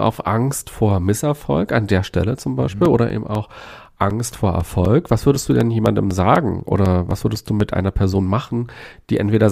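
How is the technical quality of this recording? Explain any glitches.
The recording has one clear technical fault, a run of periodic USB or driver dropouts. From 2.85 s to 7.61 s the speech is broken every 0.25 s by a brief gap of silence a few milliseconds long, around 20 in all. A background task stalls the USB bus or audio driver on a fixed schedule, so a small slice of audio never arrives and silence fills its place. Each gap is heard as a regular tick or pop, marching along at four per second wherever the speech has signal.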